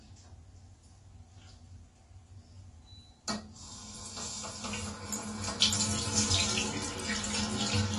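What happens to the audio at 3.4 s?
At 3.4 s you're hearing AAC compression, which runs through the whole clip. Nothing comes through above 12 kHz, and the sound is dull and smeared with a warbly, fizzy edge. That's likely AAC-LC at a low bitrate, around 32 kbps, starving bands of bits.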